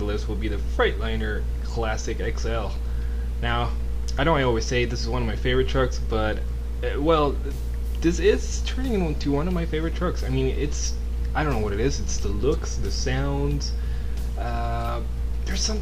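Dropped samples at 9.10 s: a fraction of a millisecond is likely missing, so the waveform jumps abruptly, producing one sharp, isolated click.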